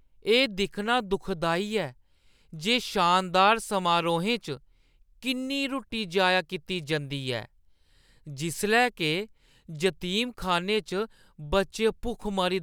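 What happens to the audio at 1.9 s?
Nothing goes wrong at 1.9 s; the speech runs through that moment intact, with no dropout, click or distortion.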